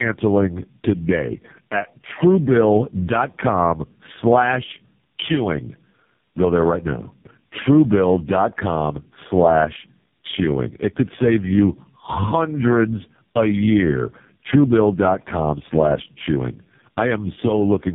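Throughout, the speech shows tandem speech coding: it sounds passed through three low-rate speech codecs in turn, which fits an AMR-NB, GSM full rate, AMR-NB chain, each recoding the last one's errors. The result is rough, muffled and warbly, with nothing above 3.7 kHz.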